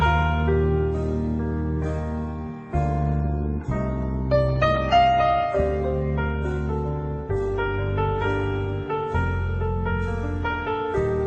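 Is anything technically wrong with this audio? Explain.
No, nothing's wrong here: it sounds like it came through an ordinary call codec, with the top end stopping around 12 kHz, just as a normal call would.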